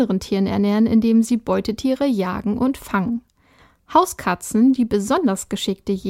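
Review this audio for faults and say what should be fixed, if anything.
No faults turn up anywhere in the recording, so nothing needs fixing. The speech can be left as it is.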